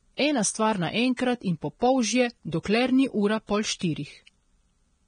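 Right from the start the whole speech clip has that hissy, grainy texture, and nothing comes through above about 9.7 kHz. That's Vorbis compression, likely at a low setting; the damage is heavy enough to fit something around 24 kbps. The encoder has pulled its cut-off down and quantised the upper band so coarsely that the fine detail there has turned into noise of roughly the same energy, so the treble sounds rough rather than crisp.

On top of that there are three pre-echoes, at 1.17 to 1.19 s, 2.63 to 2.65 s and 3.79 to 3.81 s, each about 20 to 23 ms long. In each case a sharp onset lands late in a transform block. The quantisation noise gets spread evenly across the whole block, so the hiss sized for the loud attack leaks into the quiet moment just before it. You hear a brief smear of noise ahead of each attack, and the onset itself comes across softened.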